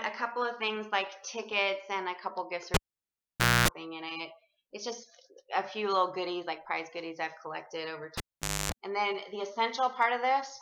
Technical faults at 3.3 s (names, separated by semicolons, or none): cable pulled and plugged in